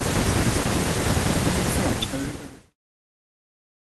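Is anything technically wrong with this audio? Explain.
No, nothing is technically wrong.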